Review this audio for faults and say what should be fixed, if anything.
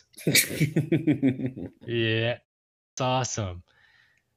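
A clipped start after a pause occurs at 2.69 s. After a pause of 0.32 s, the output device has dropped into a low-power state and needs about 285 ms to wake and lock again, so the speech that resumes there loses its first sounds and begins abruptly until 2.98 s. On a waveform the envelope jumps from flat silence to full level with no onset ramp, and a spectrogram shows energy appearing as a hard vertical edge instead of building up. To prevent it, keep the output stream open and active through pauses, or feed it low-level padding so the device never sleeps between phrases.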